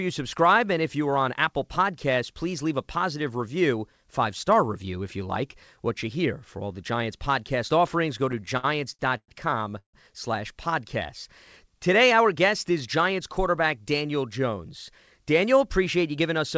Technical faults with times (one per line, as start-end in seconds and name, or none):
8.32-9.30 repeated stalls (stutter)
9.78-9.95 call audio freeze
12.03-13.67 jitter buffer speed-up